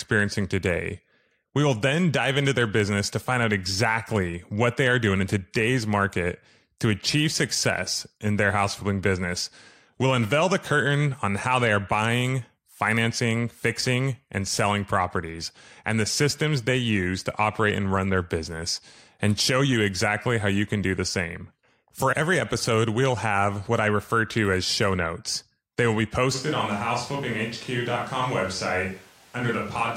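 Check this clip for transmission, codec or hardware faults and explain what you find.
There's one fault, near the end. At 26.36 s, right after "will be", the speech turns roomy and hollow, thinner in the low end, roughly 5 dB quieter, with background noise audible about 30 dB under it. That's likely a switch to a distant microphone, and it stays to the end.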